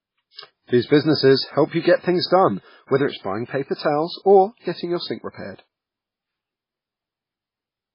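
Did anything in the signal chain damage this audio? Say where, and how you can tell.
Yes. Throughout, the speech sounds watery and swirly with nothing above 5.2 kHz, heavy codec damage that is likely MP3 compression at a very low bitrate, around 16 kbps.

Pre-echo, also from the codec: short hisses of 43 to 57 ms smear attacks at 0.34, 0.64, 2.26 s (after "help you get things") and 5.55 s (after "or getting your sink").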